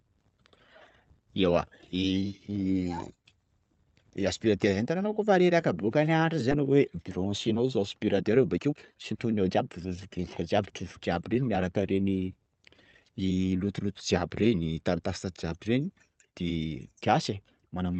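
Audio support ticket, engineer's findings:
Skip ahead at 6.51 s (to 6.62 s). Roughly a second of audio missing; playback jumps forward with no gap and no fill, the two sides spliced almost directly. Probable component: jitter buffer discarding queued audio on overflow, or loss in transit. Unlike concealed packet loss, there's no smeared or buzzy bridge, just an abrupt cut with content gone.

Jitter buffer speed-up, 7.18–7.79 s at 110% speed, then 8.29–10.84 s at 115%. Delivery sounds hurried; pitch unchanged. Roughly 70 ms and 400 ms trimmed respectively. Mechanism: jitter buffer, overfilled, drops pitch-period-sized slices repeatedly to drain excess delay. Unlike clock-drift resampling, pitch doesn't rise; unlike the skip, nothing audibly vanishes. Opus call path upstream, band-limited to about 8 kHz.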